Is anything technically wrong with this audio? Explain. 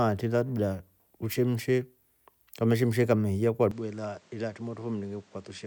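Yes. From 3.71 s to the end of the speech, the input most likely switched to a poorer device partway through the recording. The replacement path passes nothing above 8.9 kHz, so the sound turns duller, drops a few decibels in level, and gains a new noise floor well below the speech, with no gap at the change. A spectrogram shows the upper band cut off sharply at 3.71 s, and the waveform steps down slightly in amplitude there.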